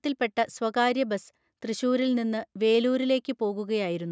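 Nothing stood out on listening; the speech simply carries the ordinary sound of call microphone processing, with the lowest bass trimmed away and nothing above 8 kHz.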